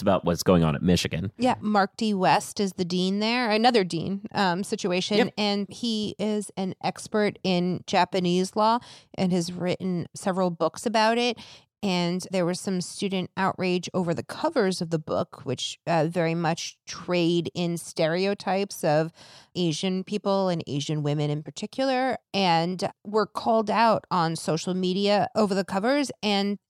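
A speech recording with nothing technically wrong with it.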